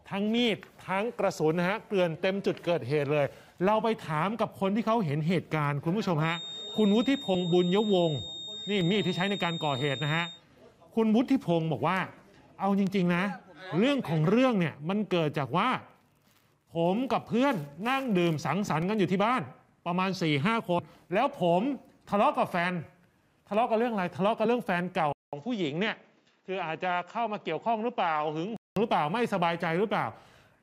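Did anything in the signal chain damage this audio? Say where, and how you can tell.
Yes, three separate things.

From 6.17 to 10.43 s there's a thin, steady feedback whistle at 3.7 kHz, roughly 15 dB under the programme. It swells and fades slowly in level but never runs away. That pattern points to the analogue/acoustic side, most likely a loudspeaker-to-microphone loop parked right at the edge of instability, where one frequency keeps ringing on its own without the gain to blow up.

There are three short blips at 7.34, 20.78 and 24.45 s. Each is a brief glitch. That's damaged data in the compressed stream, so the problem sits at the codec or storage stage. Corrupted bytes made the decoder misread or drop a frame, lose sync, and jump ahead to the next frame header. The first one lands inside the whistle.

At 25.13 s the audio drops out for about 200 ms and comes back dull and boxy. Nothing is left above 7.6 kHz, the level is down about 5 dB, and there's a new noise floor roughly 40 dB below the signal. 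It stays that way until 28.77 s. That reads as the input being switched to a poorer device, likely the driver handing over to a headset call profile or another mic with its own band limit and noise.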